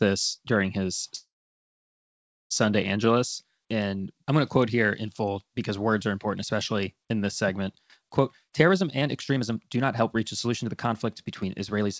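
At 1.16 s, right after "during his", the audio stops and resumes at 2.52 s. This is a call audio freeze. The last sound is carried on briefly and fades, then about 1.24 s of silence follows. When the audio returns it picks up exactly where it left off, with nothing lost. A gap of roughly 1.35 s has been inserted, and everything after it arrives that much later. The likely cause is packets held up in transit, so the jitter buffer ran dry and the receiver had to fill the wait on its own.

From 8.20 s, just after "especially in this segment", to 11.89 s there is a jitter buffer speed-up. The talker sounds hurried, running at about 122% speed while the pitch stays the same. The receiver was trimming excess buffered delay by cutting out many short, pitch-period-sized slices in succession, about 0.7 s in total. The band limit at 8 kHz throughout fits a G.722 call path.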